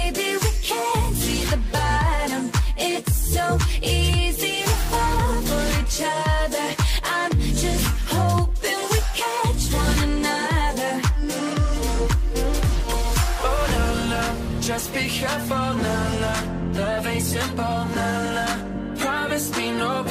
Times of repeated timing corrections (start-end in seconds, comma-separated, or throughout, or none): none